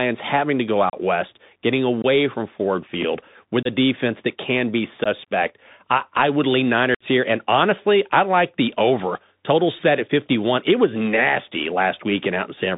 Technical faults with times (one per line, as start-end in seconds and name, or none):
0.00-12.78 Bluetooth CVSD headset codec
0.90-0.95 unconcealed Bluetooth headset packet loss
2.02-2.05 unconcealed Bluetooth headset packet loss
3.63-3.67 unconcealed Bluetooth headset packet loss
5.04-5.07 unconcealed Bluetooth headset packet loss
6.95-7.04 unconcealed Bluetooth headset packet loss